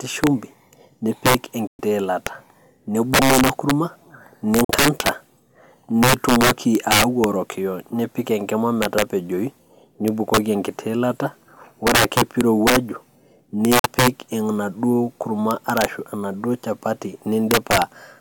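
Throughout, the speech runs about 9 dB past full scale and wraps to the opposite sign instead of limiting. This integer overflow turns loud peaks into violent cracks. At 1.67 s, 4.64 s and 13.79 s, abrupt silences of about 0.13, 0.07 and 0.07 s cut in, the first just before "ilata nibunga ina". These are likely Bluetooth dropouts from late packets, and the speech resumes as if it had played on.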